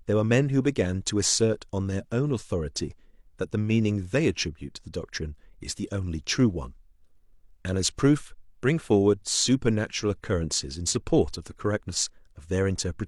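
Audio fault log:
Nothing to log here; the speech comes across without any technical trouble worth noting.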